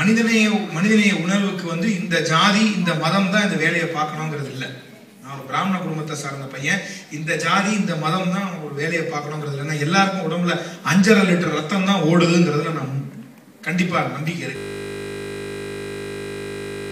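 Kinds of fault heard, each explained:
System hang loop: from 14.56 s to the end, one 20 ms slice repeats exactly. A frozen system recycles its buffer, giving a steady 50 Hz buzz.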